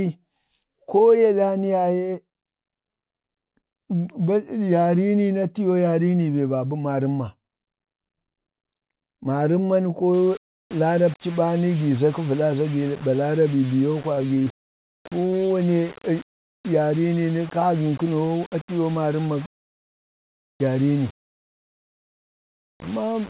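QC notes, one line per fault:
10.14–23.30 s, low bit depth without dither. From 10.14 s to the end the speech turns grainy and gritty. The distortion rises and falls with the voice, and the quietest parts break up and sputter between a few coarse levels. The likely cause is rounding to very few steps with no dither, which fits a 5-bit signal. The error tracks the waveform instead of forming a steady hiss, at about 20 dB below the speech.
14.15–15.48 s, repeated packet loss (robotic sound). Over this 1.33 s stretch the speech goes choppy, with small pieces missing. Many short holes follow close on one another. The longest lasts 17 ms. Each hole is filled by stretching the sound just before it, so the voice takes on a buzzy, robotic repetition. About 12% of the stretch is patched this way, roughly 162 ms in all. This sits on top of the gritty texture, inside a narrowband call path that carries nothing above 4 kHz.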